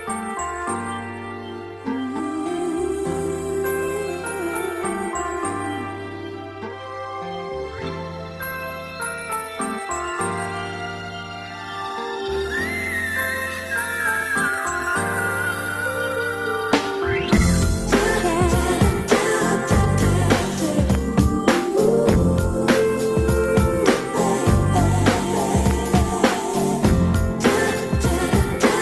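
Nothing stood out on listening; the audio simply carries the ordinary character of a call path, with nothing in it that calls for comment.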